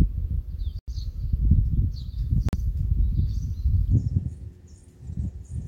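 At 0.79 s the sound drops out for 89 ms, then again at 2.49 s for 43 ms, each time resuming where it left off. That's a Bluetooth stall: interference likely delayed packets, so the headphone buffer emptied and playback waited for retransmissions.

From 3.92 s to the end, you get a section at the wrong speed. It runs 1.51 times fast, so everything sounds hurried and about seven semitones higher, likely from being played against the wrong clock rate.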